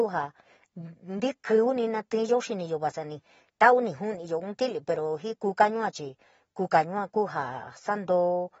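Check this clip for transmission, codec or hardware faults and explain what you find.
There's one fault, and it runs the whole way through: AAC compression. Nothing comes through above about 7.7 kHz, and the speech sounds dull and smeared, with a fizzy, warbly edge on sibilants. That points to a low bitrate, likely AAC-LC around 24 kbps, where the encoder drops the top band and coarsely quantises what's left.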